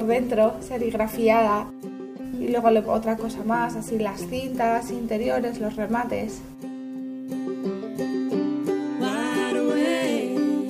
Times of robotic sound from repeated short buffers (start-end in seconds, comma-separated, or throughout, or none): none